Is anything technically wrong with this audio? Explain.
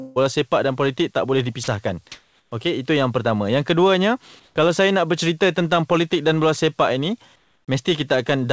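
Yes. There are two kinds of fault, both in how the call handled pauses. The speech itself carries no content above 8 kHz, consistent with a wideband call codec.

Sound dropped by the voice detector: at 1.64 s, right after "politik tak boleh", about 40 ms of speech vanishes into flat noise. The sender's voice activity detector likely classed that sound as background and stopped transmitting, so the receiver substituted comfort noise.

Comfort noise in place of the background: at 2.12–2.52 s, 4.40–4.56 s (just before "saya nak bercerita tentang") and 7.36–7.68 s (after "dan bola sepak ini"), the room background, roughly 40 dB below the speech, turns into smooth, featureless hiss. This is likely discontinuous transmission, with the receiver synthesising noise during pauses. Its level jumps about 6 dB up, about 1 dB down and about 6 dB down respectively.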